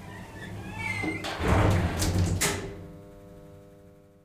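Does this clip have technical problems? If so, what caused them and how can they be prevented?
No, this clip has no technical problems, so there is nothing that needs preventing.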